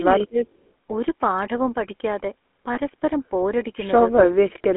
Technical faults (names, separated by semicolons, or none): GSM full-rate codec; speech suppressed in double talk; lost GSM frames